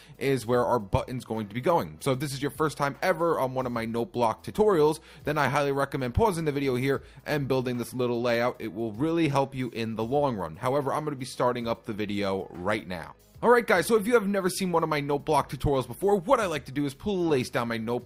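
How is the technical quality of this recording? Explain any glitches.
No technical faults are audible.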